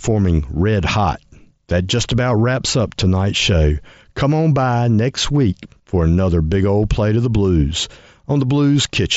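No faults are present in this speech; the mSBC headset link carries it at wideband up to about 8 kHz, with only light grain on the louder syllables.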